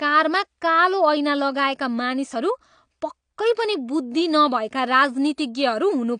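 Throughout, likely AAC compression at a low bitrate, around 32 kbps, strips everything above 9.8 kHz, leaving the speech dull, muffled and plainly smeared.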